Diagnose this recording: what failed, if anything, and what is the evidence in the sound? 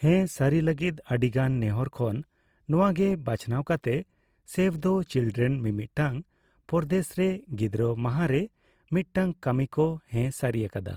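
Codec stage: likely Opus compression in CELT mode, starved at a rate fitting about 24 kbps, so band-filling noise makes the speech grainy and rough throughout.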